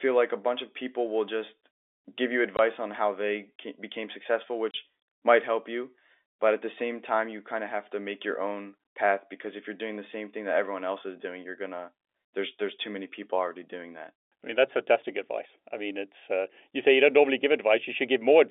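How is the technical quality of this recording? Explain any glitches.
Two short dropouts break the speech, both from packet loss filled with silence, heard over narrowband G.711 telephone coding. At 2.57 to 2.59 s and 4.71 to 4.74 s, lost packets were replaced by silence, leaving 20 ms and 30 ms holes with hard edges, which fits 10 ms packets.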